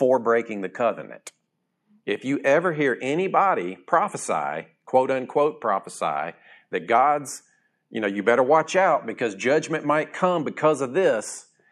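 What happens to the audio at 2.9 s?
Nothing goes wrong at 2.9 s; the speech carries on intact through that moment.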